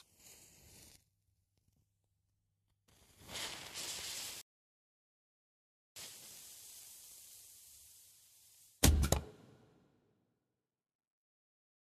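An everyday-sounds recording with a rebuffering stall: at 4.41 s the audio drops to silence and picks up again at 5.96 s exactly where it left off. The player ran dry of downloaded data and waited, so nothing's missing, but about 1.55 s gets added.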